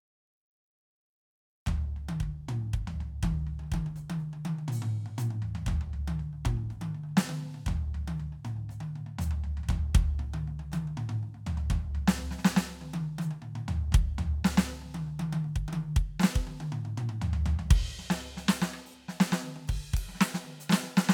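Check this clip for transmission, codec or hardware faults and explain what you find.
Nothing in the music points to a transmission, codec or hardware problem, and the signal holds steady throughout with no disturbance to report.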